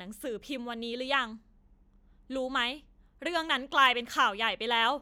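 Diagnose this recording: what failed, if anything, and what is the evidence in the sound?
Nothing in the recording points to a failure at any stage: the speech signal is continuous, with no level breaks, distortion or timing disturbances anywhere to suggest a problem in the chain.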